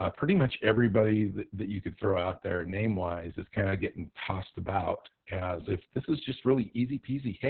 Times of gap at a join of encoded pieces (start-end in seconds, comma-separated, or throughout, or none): none